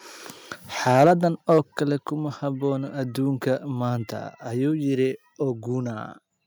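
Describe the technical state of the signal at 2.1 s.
At 2.07 s the level drops abruptly by about 5 dB, speech and background together, and stays there: a microphone volume stepped down, likely the call software cutting the input gain in one move. A single instant step, not a gradual automatic-gain ramp, marks it.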